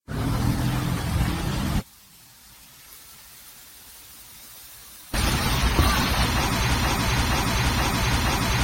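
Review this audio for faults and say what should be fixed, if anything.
Generation loss runs through the whole thing: the sound is swirly and hollow, attacks are smeared, and nothing sits above 16.6 kHz. It's likely from being re-encoded around seven times as AAC-LC at 64 kbit/s, each pass adding fresh quantisation noise. Keep a lossless master and encode only once at the end.

One channel inverted from 1.80 s to 5.14 s: one side's polarity has likely been reversed, so summed to mono the shared content cancels and the level drops by about 26 dB, leaving a faint trace. Check polarity with a correlation meter before export.

Broken-record loop from 6.75 s right to the end: a 473 ms fragment repeats exactly, back to back, four times, and whatever should have played there is gone. A stalled player or stream likely kept resending its last buffer. Add stall detection and re-capture that section.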